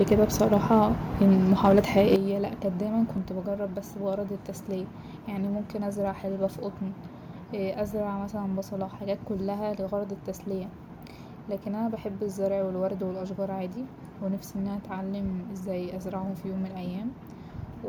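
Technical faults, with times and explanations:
0.0–0.84 s and 1.21–2.14 s, microphone overload: the loudest peaks run about 3 dB, then about 5 dB, past full scale, with a percent or two of samples flattened, just before "لا كانت دايما". The likely cause is an input gain set too high, so the converter clips the tops and adds a harsh crackle.
2.16 s, 3.18 s and 6.63 s, microphone volume stepped down: the whole level, voice and background together, drops abruptly by about 8 dB right after that clipped stretch, then by about 3 dB, then by about 1 dB just after "ممكن ازرع حلبة في". This is likely the call software's automatic gain control cutting the device input in steps after it detected the overload.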